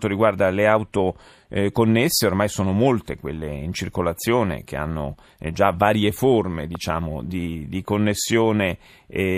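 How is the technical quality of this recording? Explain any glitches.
The recording has one clear glitch. A loud pop at 6.75 s, just after "eh già varie forme" and before "di di", is likely a brief voltage pulse from a plug, switch or static discharge. It lands as a single sharp click, roughly 5 dB above the speech, while the speech continues underneath.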